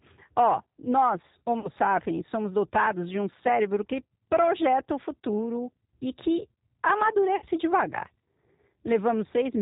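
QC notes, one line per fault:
Throughout, G.729 codec: the speech is resynthesised at 8 kbit/s from a vocal-tract filter, a pitch predictor and a handful of excitation pulses per 10 ms frame, so everything above 4 kHz is gone and the voice has a plainly rough, synthetic edge.
1.60 to 1.69 s and 7.36 to 7.46 s, VoIP packet loss concealed by the speech codec: the decoder filled gaps of about 40 ms and 60 ms by extending its last pitch and filter with falling gain. This gives a brief fading smear, buzzy or noise-like, and the voice stays weak or distorted just after each gap.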